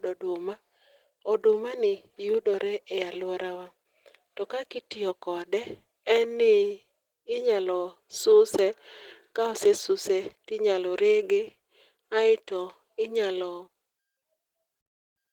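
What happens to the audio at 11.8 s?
At 11.8 s you're hearing Opus voice compression that runs the whole clip. It sounds like a roughly 16 kbps hybrid stream: the speech comes out plainly hoarse and slightly robotic because the excitation is coded so coarsely.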